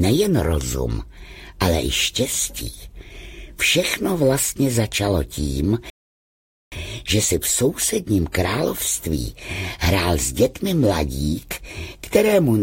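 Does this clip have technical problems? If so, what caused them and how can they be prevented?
Yes: a rebuffering stall from 5.9 to 6.72 s. The player's buffer ran dry, and the sound resumes exactly where it stopped. Unlike a dropout, nothing is skipped; about 0.82 s of silence is added. A larger playback buffer or adaptive bitrate switching would prevent it.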